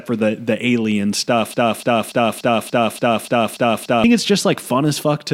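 The playback or streaming chain likely stalled at 1.54 s and kept resending the last fragment it held, producing a broken-record loop that runs until 4.04 s. A slice of speech about 290 ms long repeats back to back nine times. Each pass is identical, giving a stuttering, mechanical chatter. The speech that should have filled those two and a half seconds is lost. The sound resumes only after the loop ends.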